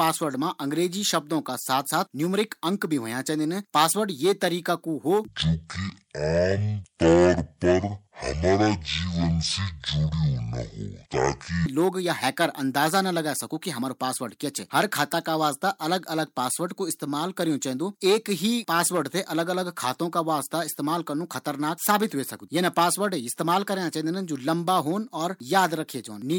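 From 5.28 to 11.66 s, after "यी तरीका कू हो", a section at the wrong speed plays at 0.5x. The speech drops about ten semitones and drags until "लोग या". Pitch and tempo fall together, unlike pitch-shifting alone, likely from a clock mismatch.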